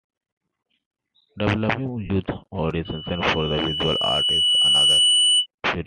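A speech recording, carried over a link that was likely Bluetooth LC3 compression, so the codec discards much of the upper spectrum and fills the gap with synthetic noise. Throughout the clip, that gives the voice a plainly audible breathy, grainy edge and a hashy top end. The rate sounds close to 48 kbps with 7.5 ms frames. At 2.05 to 2.10 s, LE Audio frames were lost, about 45 ms of audio, which fits six 7.5 ms frames going missing. The decoder covered the gap by replaying the last good spectrum with randomised signs and letting it decay. The speech briefly dissolves into a noisy, smeared burst before normal sound resumes. From 2.85 s a loudspeaker feedback squeal appears. A microphone is picking up the loudspeaker it drives, and at 3 kHz the loop gain exceeds unity, so that frequency keeps reinforcing itself. It is heard as a pure tone that swells over roughly two seconds into a piercing squeal that ends up louder than the speech, by a few decibels. 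The howl continues until it stops at 5.46 s, consistent with the loop being broken.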